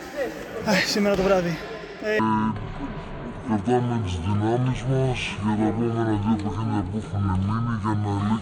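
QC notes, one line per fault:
2.19–8.41 s, section at the wrong speed: from 2.19 s to the end the audio plays at 0.527 times its recorded speed, so pitch falls about ten semitones and everything drags, pitch and tempo sinking together, likely from playback or editing against the wrong clock.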